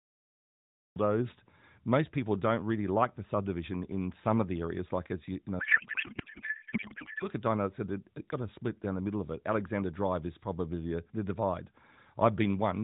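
Just after "as you you know", from 5.60 to 7.25 s, the speech gives way to a garbled, warbling noise that barely tracks it. This is a codec payload misread. The AMR frames are decoded with their fields in the wrong positions, which fits octet-aligned packing being read as bandwidth-efficient. Unlike packet loss, there are no gaps or concealment fades: sound continues but is wrong throughout, then the band-limited AMR speech around it returns.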